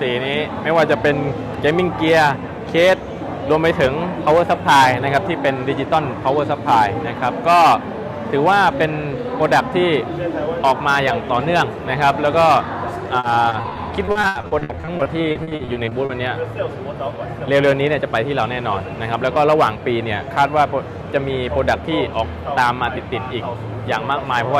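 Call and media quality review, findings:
Choppy, robotic sound 13.19–16.11 s: repeated packet loss in the network path, jitter-buffer concealment repeating the last sound across short gaps up to 80 ms, roughly a quarter of the stretch patched.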